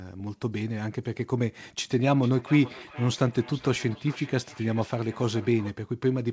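From 2.23 s to 5.78 s there is a feedback echo between two devices. A second device in the room replays the call, and this microphone picks it up again. The speech returns roughly every 0.4 s, thin and ringing, at most about 19 dB below the original.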